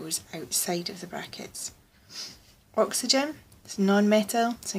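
No technical faults can be heard anywhere in this audio.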